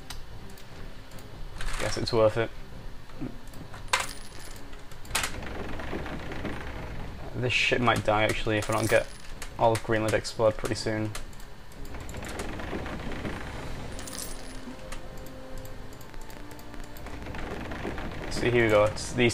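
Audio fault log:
16.10–19.31 s, train of clicks: roughly thirty sharp, similar-shaped pulses at about 10 per second, unevenly spaced, ticking over the sound until the end. They peak about 5 dB above the signal, likely from interference or a faulty connection or power supply injecting repeated transients.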